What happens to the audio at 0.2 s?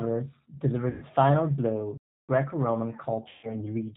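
At 0.2 s you're hearing G.729 coding, which runs through the whole clip. The speech is rebuilt from a vocal tract filter, a pitch predictor and a few pulses per frame, with nothing above 4 kHz, so it sounds plainly rough and synthetic, consistent with 8 kbit/s G.729A.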